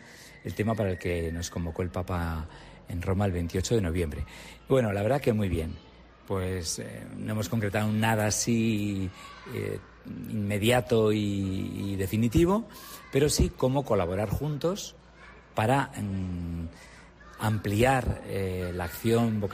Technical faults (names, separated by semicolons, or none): CD scratch ticks